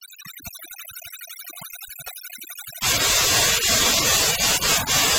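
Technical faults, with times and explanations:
Throughout, overdone noise removal: heavy suppression zeroes bands near the noise estimate, leaving near-silent gaps with twinkling specks and patchy, holed spectrogram regions.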